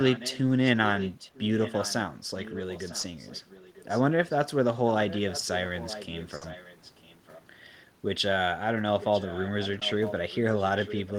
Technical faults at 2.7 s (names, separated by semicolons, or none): echo leak